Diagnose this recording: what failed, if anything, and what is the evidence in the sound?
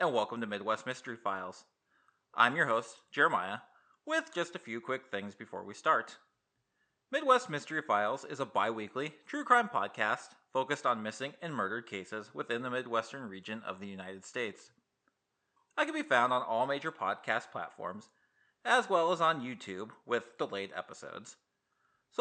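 Nothing stood out on listening, with only a faint room noise sitting about 53 dB beneath the speech as part of the recording itself.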